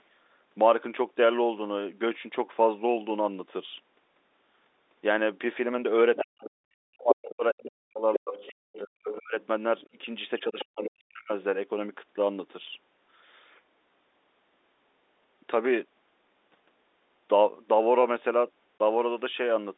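Speech over a telephone line, with three kinds of fault. The other side's voice leaking through is heard at 6.16 to 6.48 s, 7.1 to 10.05 s and 10.59 to 10.9 s. It is a second voice, a little quieter than the talker at first and then well below. The likely cause is a loudspeaker echo the echo canceller failed to remove. Speech is suppressed in double talk from 6.23 to 9.36 s and from 9.91 to 11.32 s. The talker's voice dips by as much as about 40 dB, in pieces, while the leaked voice plays. It adds up to roughly two seconds, then under one second. This likely comes from the canceller turning both voices down at once. Packet loss filled with silence cuts a hard 20 ms hole at 18.8 s. That is one lost packet's worth of audio, replaced by silence.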